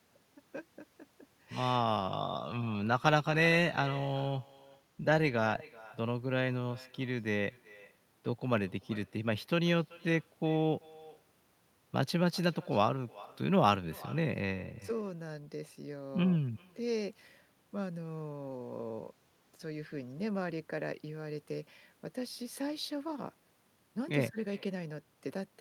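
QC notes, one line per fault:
Throughout, echo with no canceller: every phrase is trailed by a faint, thin copy of itself landing around 400 ms later, sitting about 23 dB below the direct speech. The far end is playing the call out of a loudspeaker, their mic is catching it, and nothing on their side is subtracting it, so your own speech rides back across the network round trip.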